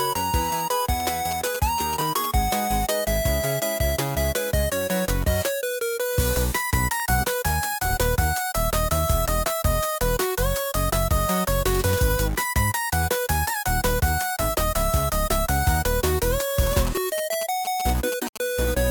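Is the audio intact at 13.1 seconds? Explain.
Yes, at 13.1 seconds the audio is intact, with no dropout, click, distortion or other fault audible at that point.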